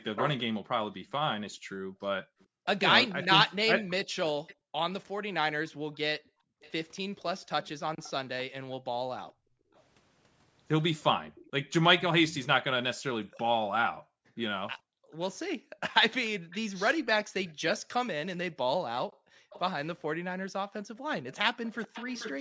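Speech in this recording is shadowed by a delayed repeat of itself, an echo leak. A second copy trails the original by 438 ms from 0.16 to 4.55 s, from 6.61 to 12.47 s and from 15.3 to 22.34 s. It is strong in the first stretch, barely audible in the second and moderate in the third. The likely cause is a loudspeaker on the far side whose echo canceller let part of the returning audio back into the call. Because the repeat is a separate, distinct copy at a fixed lag, not a diffuse smear, it is not room reverberation. The room sound also dips while the canceller clamps the microphone, which is background gating by the echo canceller. This happens from 0.96 to 2.66 s, 4.55 to 6.61 s, 9.33 to 9.73 s, 13.26 to 16.51 s and 19.07 to 20.96 s. The drops reach about 40 dB, and about 25 dB at 9.33 s, for brief spans within each window. Only the ambience falls away and then recovers, so these are not dropouts or a level-triggered noise gate.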